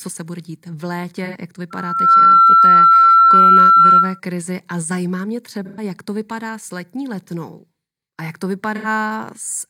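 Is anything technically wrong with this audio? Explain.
Yes. This speech clip has two kinds of fault.

AAC frame loss with concealment occurs at 1.25–1.36 s, 5.65–5.83 s and 8.76–8.87 s. The gaps of about 85 ms, 128 ms and 85 ms fit two or three whole AAC frames going missing. The decoder covers each hole by reusing the previous good spectrum with randomised phase. Each gap is heard as a brief smeared, noisy patch.

A loudspeaker feedback squeal runs from 1.70 s to 4.20 s. A microphone is picking up the loudspeaker it drives, and at 1.4 kHz the loop gain goes above one. That tone feeds itself and swells in under half a second into a steady whistle, well above the speech level. It holds until 4.20 s.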